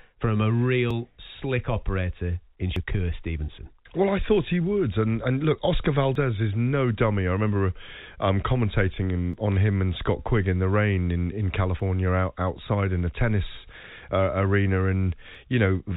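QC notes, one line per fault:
0.91, 2.76, 6.15, 9.33, 11.80, 15.35 s: dropped buffer (overrun). A jump ahead with no gap. Roughly 20 ms lost at the first, third and fourth, 50 ms at 11.80 and 70 ms at 2.76 and 15.35. Likely unread buffers overwritten.
9.52 s: bit errors on a digital phone line. A few corrupted telephone samples at a low error rate, each flipped bit jolting one sample.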